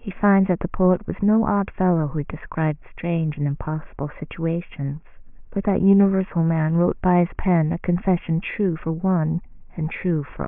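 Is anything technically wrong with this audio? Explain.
No, nothing technically wrong stood out on listening to this speech recording.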